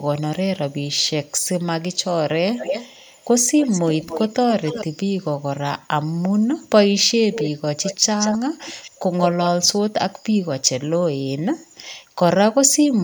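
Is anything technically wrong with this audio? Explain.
Yes. The speech carries an echo leak in six stretches: 0.0–0.04 s, 0.7–1.48 s, 2.57–3.25 s, 3.58–4.84 s, 7.33–7.5 s and 7.82–9.48 s. A delayed copy of the voice trails it by 195 ms early on, very faint at about −35 dB. Around 2.6–4.8 s it lags 264 ms at about −10 dB, and after 7.3 s it lags 178 ms at about −5 dB, nearly as loud as the voice. This is likely a far-end loudspeaker's echo canceller letting picked-up sound return. On a spectrogram each syllable's harmonic pattern reappears shifted right by that delay. In the waveform, envelopes gain smeared trailing copies.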